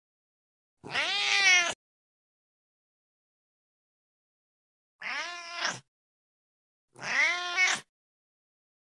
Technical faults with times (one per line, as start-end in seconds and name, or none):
7.56-8.89 wrong sample rate